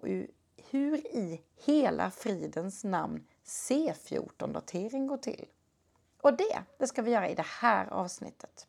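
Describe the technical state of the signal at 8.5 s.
At 8.5 s the speech signal is intact, with no audible technical fault at that moment.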